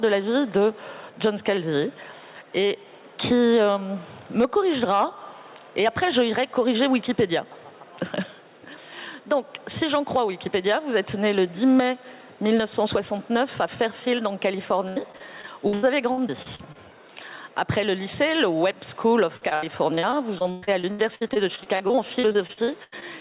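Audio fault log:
Throughout: gain pumping. Loud and soft parts sit closer in level and the sound is squashed, a swing of roughly 10 dB, likely from gain set far too high with a fast limiter clamping it. On a waveform the envelope looks flattened, with the noise floor rising between peaks.
14.88–16.77 s and 19.37–23.03 s: repeated packet loss (robotic sound). The first stretch has frequent short holes, the longest 82 ms. The second is denser, with holes up to 118 ms and roughly a quarter of it concealed. Each hole is patched by stretching the last sound, so the result is choppy, with pieces missing. A spectrogram shows smeared, repeated frames and abrupt vertical seams, all beneath the flat 4 kHz ceiling of the G.711 call path.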